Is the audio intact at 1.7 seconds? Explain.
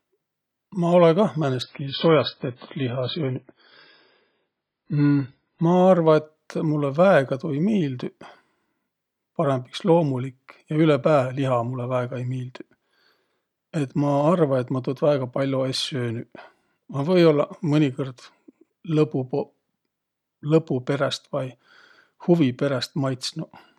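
No. From 1.62 to 5.62 s an adaptive stream drops to a lower bitrate after the connection slows, so the sound switches suddenly to a version with nothing above 5.2 kHz and swirly codec artefacts, consistent with a very low bitrate. Unlike a dropout, there is no gap.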